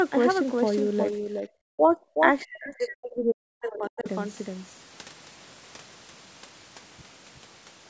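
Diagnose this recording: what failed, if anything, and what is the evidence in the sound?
A second full-band copy of the speech trails the original by roughly 400 ms, around 5 dB quieter, for the whole clip, with no room colour or decay. This doubled audio track likely comes from a slower second capture path or a misaligned edit.

The speech dips at 1.12–1.48 s, 1.76–1.97 s and 2.13–2.24 s, then drops very deeply from 2.41 to 4.06 s, as far as roughly 40 dB. This is likely speech suppressed in double talk: the call's echo canceller could not separate the near-end talker from the overlapping far-end echo and attenuated both.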